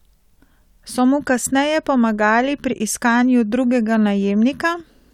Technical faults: none

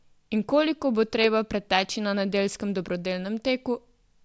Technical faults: none

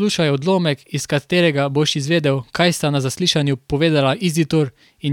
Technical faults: none

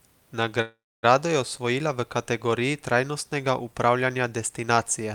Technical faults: call audio freeze

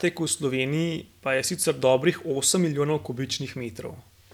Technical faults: none

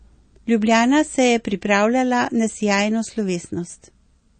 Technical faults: MP3 compression

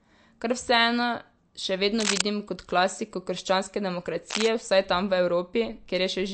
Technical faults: MP3 compression; cable scratch noise

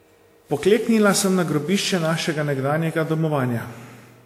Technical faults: generation loss

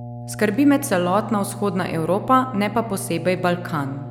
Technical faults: mains hum

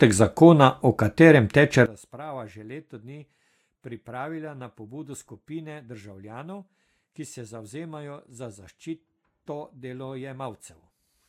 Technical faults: one channel inverted

